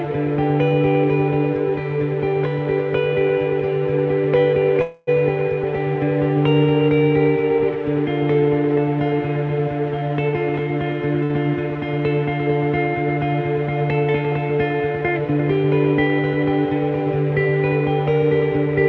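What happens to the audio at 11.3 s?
A short stall from a late packet, 11.24–11.33 s: the jitter buffer ran dry and stretched the last sound about 55 ms, showing as a smeared, flattened stretch on the spectrogram.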